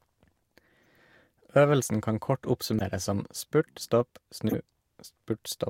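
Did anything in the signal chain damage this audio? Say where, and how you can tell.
Yes. At the codec stage, corrupt frames were decoded anyway, so misread gains and codes put energy at wrong frequencies: a faint blip at 0.83 to 0.86 s, and loud bursts at 2.79 to 2.82 s between "kan kort" and "som spurt stopp", and at 4.49 to 4.56 s after "som spurt stopp".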